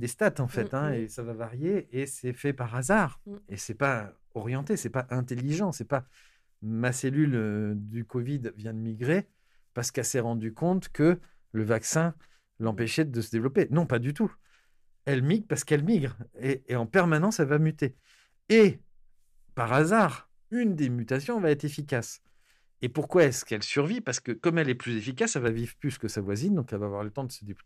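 Speech. From 23.51 to 25.48 s, just before "vivre plus que sa", the sound turns dull, likely an input switched to a poorer device. The spectrogram shows nothing above 8.2 kHz, and the waveform level stays unchanged.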